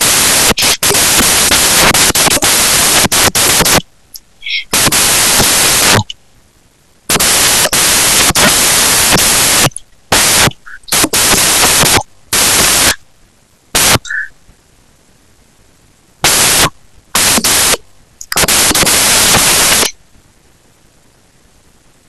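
Speech buried for its whole length under loud, harsh broadband noise: samples built from the wrong bytes, where each value is assembled off by a byte or in swapped order, so the jittery low bits dominate.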